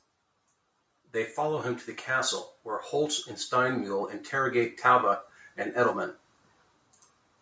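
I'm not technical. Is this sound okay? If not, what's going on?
No. Between about 3.49 and 5.68 seconds, the call's automatic gain control decided the speech was too quiet and gradually turned its own volume up. This is automatic gain rising: because the system raises everything it hears, the voice and the background noise swell together over those two seconds rather than jumping suddenly. The clip comes through a normal call microphone chain, which trims the deepest bass as expected.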